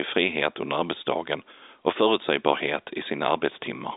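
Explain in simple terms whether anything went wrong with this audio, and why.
Nothing went wrong here: the speech just has the narrow, slightly boxy sound of an ordinary landline call, because G.711 telephone coding only carries sound up to about 3.8 kHz, so that thinner tone is how phone audio is meant to sound.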